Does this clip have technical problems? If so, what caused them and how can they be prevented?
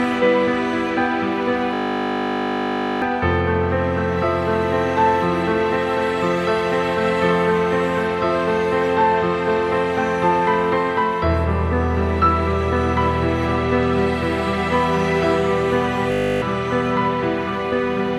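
Yes. A system hang loop buzzes at 1.74–3.02 s and again at 16.12–16.42 s. The system froze while the sound hardware kept replaying one 20 ms slice of its buffer, giving an exact 50 Hz repeat instead of the silence a dropout would leave. Fixing the driver or system stall behind the freeze prevents it.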